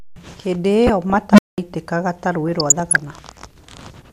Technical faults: DAB burbling; unstable filter

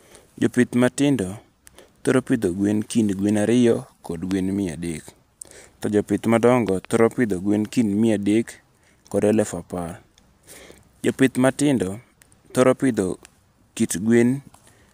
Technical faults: loud pop

